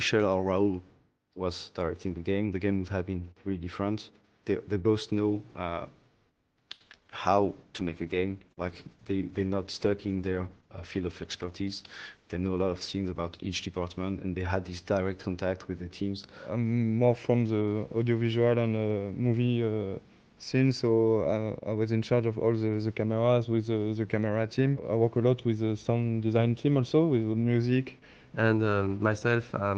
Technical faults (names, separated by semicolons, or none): repeated packet loss (robotic sound); call bitrate drop; jitter buffer speed-up